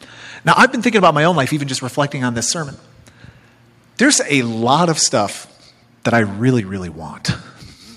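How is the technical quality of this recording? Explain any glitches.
The recording has repeated distortion and abrupt level drops.

Microphone overload appears at 0.48–0.66 s, just before "been thinking", then at 0.96–1.26 s, just before "own life even just", and again at 4.03–4.05, 4.32–4.38, 4.71–4.82 and 6.07–6.19 s. The loudest syllables sound harsh and crackly. The likely cause is input gain set so high that peaks exceeded the converter's limit, by about 9 dB at first and about 1 to 5 dB later. On a waveform the tops are cut flat. On a spectrogram the overloads show as bright vertical smears of added high harmonics.

Microphone volume stepped down three times: at 0.62 s, just before "been thinking", at 4.68 s and at 6.6 s. Each time the speech and the background fall suddenly in level, by about 3, 2 and 5 dB. This is likely call software reacting to the clipping by lowering the input volume in one step. 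The waveform envelope shrinks abruptly at those points, and the spectrogram dims evenly across all frequencies.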